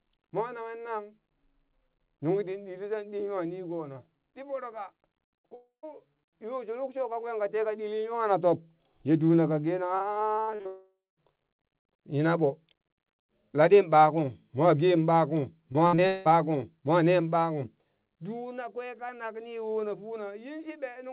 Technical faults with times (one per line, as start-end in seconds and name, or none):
5.38-5.46 burst of packet loss
5.50-5.53 short concealed packet loss
5.55-5.85 long network dropout
10.15-10.67 repeated packet loss (robotic sound)
10.67-11.19 long network dropout
15.73-16.27 repeated packet loss (robotic sound)